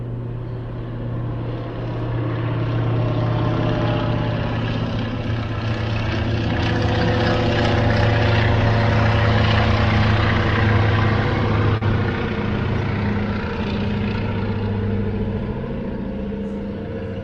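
A clip of sounds, with one short concealed packet loss at 11.77 to 11.83 s: about 40 ms went missing, and the decoder papered over it by extending the preceding sound, leaving a brief smear.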